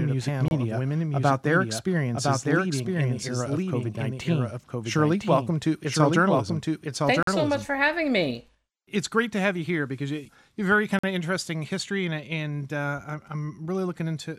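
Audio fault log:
0.00–7.66 s: doubled audio track. A second full-band copy runs about a second behind, about 5 dB quieter. It has no room colour. It is already present at the start and stops abruptly between "a panel of women" and "having me". A lagging second capture path is the likely cause.
0.48 s, 7.23 s, 10.99 s: block of digital silence. The sound drops to silence for 28 ms, then 46 ms twice. There is no fade. The last falls between "you you have very" and "of interesting history and". The 46 ms gaps fit a 2048-sample buffer not filled in time.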